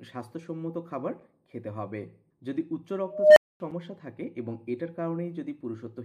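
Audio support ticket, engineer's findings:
Chunk boundaries not joined seamlessly: silence left at each new block, giving a 7 ms hole at 1.20 s and 3.71 s. Spacing of 2.5 s indicates gap between chunks. No audio lost, only abruptly interrupted at each join.

Unstable filter, 3.06–3.60 s: recursive stage running on bad coefficients, output diverging. Tone near 700 Hz swells over about 300 ms into clipping, then numeric overflow mutes output for roughly 240 ms until the filter state resets.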